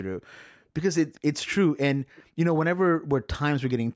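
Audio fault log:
1.14–1.20 s and 3.68–3.73 s, echo leak: two brief, faint delayed copies of the speech arrive about 409 ms after the original, the first roughly 30 dB below the direct speech and the second a little stronger at roughly 25 dB down. Each lasts only around 50–60 ms, so it registers as a short ghostly scrap rather than a full repeat. This is likely a loudspeaker-to-microphone path at the far end whose echo canceller left a residue that was sent back.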